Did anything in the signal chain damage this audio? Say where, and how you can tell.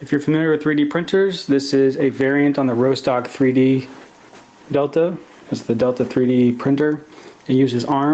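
Yes. Gain pumping runs through the whole clip. The level swings by around 15 dB. Loud and quiet passages sit unnaturally close together, and the sound has a squashed character. The likely cause is an input gain set far too high for the microphone, feeding a fast limiter or compressor that clamps down on every peak and releases in the pauses. The call's microphone processing, which cuts the lowest bass and leaves nothing above 8 kHz, is not part of this problem.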